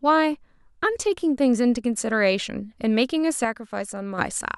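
From 3.45 to 4.18 s speech falls abruptly by about 6 dB, likely one channel dropping out; the waveform steps down, the spectrogram dims evenly.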